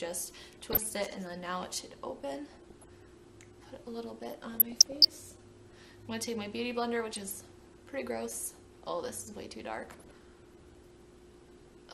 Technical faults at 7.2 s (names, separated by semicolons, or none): MP2 compression; DAB burbling